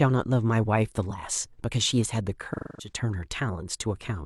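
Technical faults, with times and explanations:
2.53 to 2.92 s, AAC frame loss with concealment. About 256 ms of coded speech never reached the decoder, which fits a run of about six AAC frames. The decoder did not leave a gap. It rebuilt the missing stretch from the last good spectrum, reusing that spectral shape with altered phase or smoothed energy. The speech there is an estimate, not a recording. That is why the patch sounds smeared and unnatural until real frames resume.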